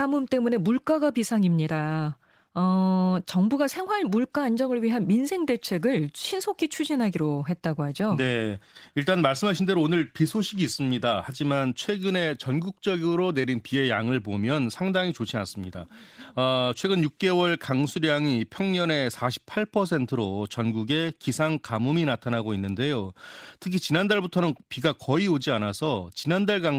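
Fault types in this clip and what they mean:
Nothing stood out as a fault on listening to this speech.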